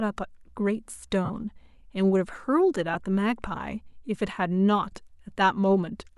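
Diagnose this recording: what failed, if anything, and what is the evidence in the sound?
Lost LE Audio frames on the Bluetooth link. The speech briefly turns to a noisy smear at 1.25 to 1.30 s, 2.94 to 2.96 s and 4.92 s. The LC3 decoder fills each gap by replaying the last spectrum with random signs. The 45 ms gap fits six 7.5 ms frames.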